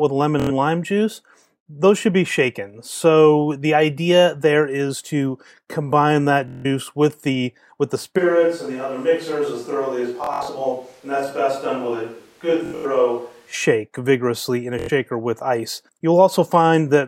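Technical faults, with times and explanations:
0.40, 2.97, 6.48, 10.24, 12.66 and 14.79 s, Bluetooth stutter: packets arrive late or are lost and the receiver replays its last slice (about 23 ms) until new data arrives. This gives a buzzing repeat lasting 23 to 163 ms, the first right after "with lemon", before the sound jumps ahead.
8.20–13.52 s, switch to a distant microphone: the sound suddenly turns hollow and roomy, about 5 dB quieter, with room noise about 35 dB below it. The close microphone likely dropped out.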